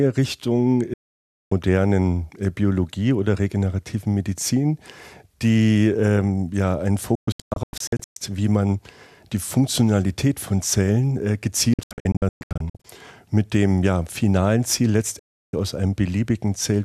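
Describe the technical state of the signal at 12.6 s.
At 12.6 s you're right inside a digital broadcast dropout running from 11.74 to 12.85 s. The receiver is losing frames and muting, with fades of about 3 ms, so the speech breaks into short holes, the longest 120 ms, about 0.62 s gone in total.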